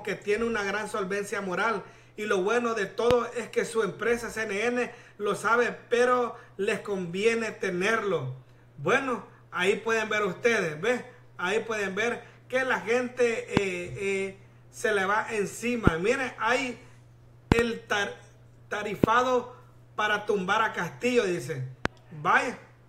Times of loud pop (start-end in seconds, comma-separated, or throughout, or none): 3.11-3.13, 13.57-13.59, 15.87-15.90, 17.52-17.61, 19.04-19.06, 21.85-21.88